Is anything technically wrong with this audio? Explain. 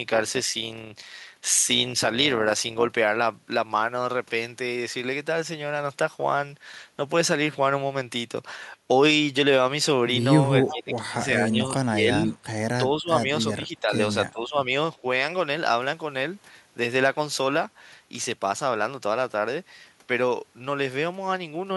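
Yes, there are three separate problems in this speech clip.

From the start to 2.95 s there is overlap-add ripple. The audio was split into windowed frames and rejoined with overlaps that do not add back to a steady gain, so the level swings by about 6 dB once per frame, at around 200 Hz. That rate is fast enough to sound like a buzzy, robotic roughness rather than a slow tremolo. The regular frame-locked pulsing separates it from level dips tied to the conversation.

Between 10.67 s and 14.57 s the speech is suppressed in double talk, in six pieces: 10.67 to 11.15 s, 11.51 to 11.64 s, 11.81 to 12.34 s, 12.81 to 13.28 s, 13.56 to 13.92 s, and 14.31 to 14.57 s. The voice drops out in chunks, by only a few dB at 11.51 s and by roughly 20 to 25 dB at its deepest around 10.7 s and 12 s. This is likely an echo canceller turning down the near talker while the far side also speaks. Unlike the ripple, these dips are irregular and follow the exchange.

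From 10.68 to 10.75 s there is a short echo leak. A faint copy of the voice, about 10 dB below the speech, returns 367 ms late. This is likely the loudspeaker end's echo canceller letting residual pickup through. The delayed repeat of earlier sound sets it apart from the suppression gaps it overlaps.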